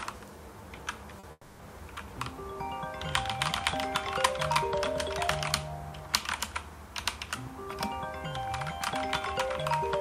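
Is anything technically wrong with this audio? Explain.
Yes. From 1.19 to 1.26 s there is a brief smear where about 40 ms of audio never arrived in time. This is short concealed packet loss, patched by extending the preceding sound. From 1.31 to 1.62 s the sound turns into a fading buzz or hiss for about 280 ms, then goes silent for about 30 ms before resuming. This is likely a long network dropout, with the gap covered by concealment until it ran out.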